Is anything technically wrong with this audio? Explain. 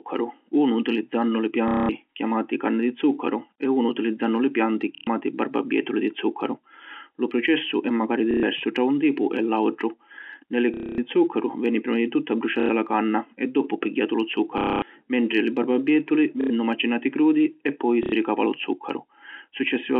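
Yes, there's a clear case of packet loss with the last packet repeated, in eight short bursts at 1.68, 4.95, 8.31, 10.74, 12.6, 14.58, 16.41 and 18.03 s, lasting 90 to 240 ms. The receiver kept replaying its last chunk until fresh audio arrived, so each gap turns into a robotic stutter buzzing around 33 Hz, which fits 30 ms packets. Landmarks: one ends just before "zuccaru veni prima di", and another sits between "mentri li barbabietuli" and "macinati crudi e poi". The G.711 telephone band underneath sounds as it should.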